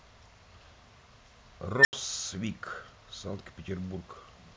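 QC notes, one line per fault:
1.76–1.93 s, unstable filter: a recursive filter stage ran away when its feedback exceeded unity, so its output grew without bound instead of settling. In the speech this is heard as a tone of around 2 kHz that swells from nothing to a harsh, clipped squeal in about 88 ms. The internal values then overflow, and the output drops to silence for about 80 ms until the filter resets and the speech returns.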